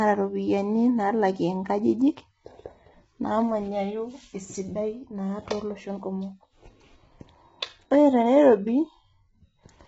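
Throughout, the speech sounds rough and grainy, with hiss filling the gaps between harmonics and nothing above 7.8 kHz. This is likely heavy low-delay AAC compression: short AAC-ELD frames resolve pitch poorly, and the starved bits fit a bitrate around 16 kbps.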